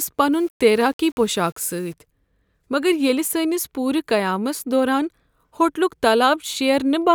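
A speech clip with low bit depth without dither from 0.33 to 1.94 s. Here the sound turns grainy, and quiet parts sound gritty. The error sits only about 35 dB below the signal. The likely cause is rounding to 8 bits with no dither.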